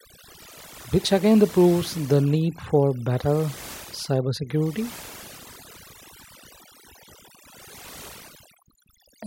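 Throughout the recording, the background drops to near silence dotted with twinkling specks. This is overdone noise removal: a noise reducer set too hard cuts individual frequency bands near its noise estimate, taking quieter speech detail with them.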